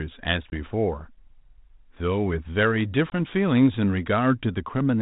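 Packet loss on an ADPCM call cuts hard-edged 20 ms holes, about one packet each, at 0.50 to 0.53 s and 3.10 to 3.13 s. The decoder's adaptive predictor and step size lose step with the sender's, so the 32 kbit/s G.726 speech returns briefly distorted before settling.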